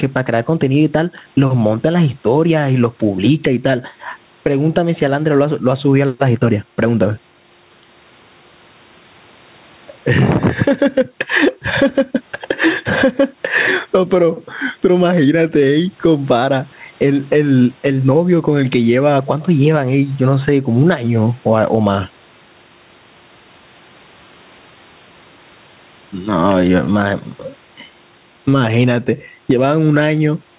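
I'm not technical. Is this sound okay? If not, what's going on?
No, not quite. There's gain pumping all the way through this speech, so everything sounds squashed. That's likely the microphone level set far too high, with an automatic limiter constantly yanking it back down.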